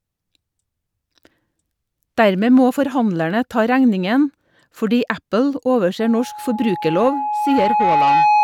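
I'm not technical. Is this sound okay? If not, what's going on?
No. From about 5.99 s until the end, there is loudspeaker feedback squeal. The microphone is picking up the loudspeaker it feeds, and that loop keeps amplifying one pitch, here a tone of about 841 Hz. The tone swells over roughly two seconds and ends up louder than the speech. The squeal stops only when the loop is broken, by turning the microphone down or moving it away from the loudspeaker.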